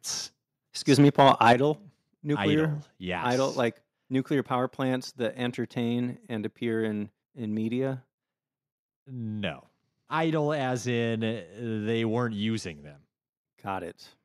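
From 0.92 to 1.53 s the loudest parts of the speech turn harsh and crackly, with a gritty, flattened edge on the syllable peaks instead of a clean rise and fall. This is microphone overload, likely from the input volume being set too high, so the signal pushes roughly 5 dB past what the converter can represent. The tops of those peaks are sliced off, and a few percent of the samples in that stretch were pinned at the converter's limit, producing the distortion.

At 1.53 s, right as the distorted passage ends, the whole signal drops in level at once, with the voice and the background falling together by about 8 dB in a single step rather than fading. This is the microphone volume being stepped down, likely by the call software reacting to the clipping it had just detected and cutting the device's input gain in one move. The speech after this point sounds noticeably quieter than what came before.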